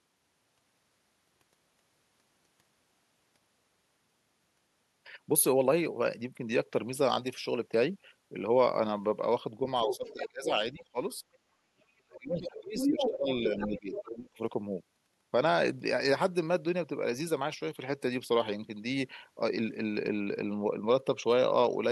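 From 9.85 to 10.97 s and again from 11.56 to 14.35 s, the talker's speech ducks by roughly 20 dB and then by as much as 40 dB. This is speech suppressed in double talk, likely from an echo canceller clamping down while both ends spoke; unlike a network dropout, it coincides with the far voice. The other side's voice leaking through sits inside these spans: 9.89–10.29 s at about 5 dB below the talker, a brief scrap at 10.78–10.83 s, 12.17–12.47 s, and 12.78–14.03 s at roughly equal level. It is a second voice, likely uncancelled loudspeaker echo, not a reverb tail of the talker.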